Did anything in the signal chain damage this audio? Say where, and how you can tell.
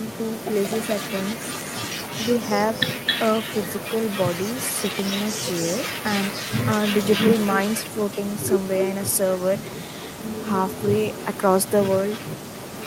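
Yes: echo leak from 0.0 to 12.9 s, a delayed copy trailing the speech by 0.27 s, roughly 10 dB down, likely a far-end loudspeaker echo canceller failing in call processing.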